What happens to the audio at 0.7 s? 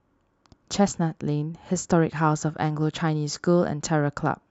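Nothing goes wrong at 0.7 s; the speech plays through that moment intact, with no dropout, click or distortion.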